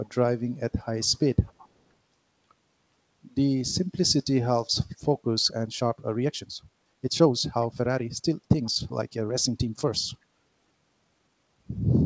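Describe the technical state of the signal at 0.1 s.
From 0.05 to 0.09 s, an echo leak: a faint copy of the speech arrives 369 ms late, likely slipping past a loudspeaker echo canceller. It is a discrete repeat rather than reverb's smear.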